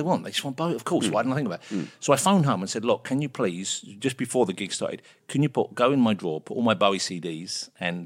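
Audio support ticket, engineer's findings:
No faults found in the speech recording; nothing to report on this ticket.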